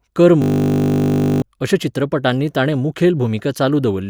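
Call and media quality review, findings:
System hang loop, 0.42–1.42 s: steady 50 Hz buzz replaces the speech, with about a second of audio lost. Driver or host stall while the audio device replayed its ring buffer; the 20 ms loop period suggests a buffer of that length.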